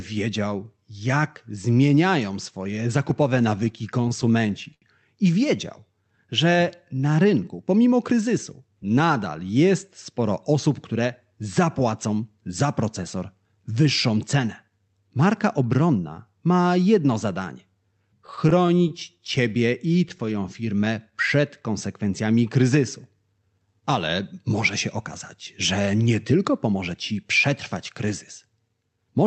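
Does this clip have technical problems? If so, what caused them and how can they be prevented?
Yes. Repeated stalls (stutter) occur from 3.09 to 4.84 s and from 18.27 to 20.21 s. Packets arrived late, so the jitter buffer kept emptying and the receiver stretched the last sound to bridge each gap. The first stretch has twelve gaps filling 177 ms, the longest 77 ms and faded. The second has fifteen shorter ones totalling 150 ms, and the speech drags and stutters. A larger or faster-adapting jitter buffer, or a steadier network route, would prevent this.

Jitter buffer slow-down follows from 5.56 to 6.12 s and from 19.43 to 21.42 s. With its reserve running low, the buffer repeated single pitch periods to rebuild it. That added 60 ms in the first case and 155 ms in the second, so the speech plays at about 91% and then 93% speed with the same pitch and drawn-out sounds. Keeping the buffer from draining, through more stable packet delivery, would prevent this.

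Jitter buffer speed-up appears from 8.11 to 9.00 s, 23.39 to 25.01 s and 25.79 to 27.13 s. After late packets arrived in bunches, the buffer held too much audio and trimmed pitch periods, removing roughly a tenth of a second each time. The speech runs at 107 to 109% speed, hurried but unchanged in pitch. Smoothing packet delivery so the buffer does not overfill would prevent this.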